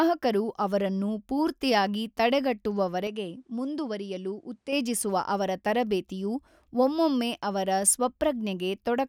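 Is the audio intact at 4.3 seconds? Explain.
No. At 4.3 seconds the speech sits inside a stretch from 3.07 to 4.73 s where it turns duller and drops by roughly 5 dB, with nothing above about 11.2 kHz and a faint new background noise some 50 dB down. The change is abrupt, with no gap. This is likely an input switched to a poorer device, whose narrower band, different tone and own noise floor replace the original microphone's until the sound clears again.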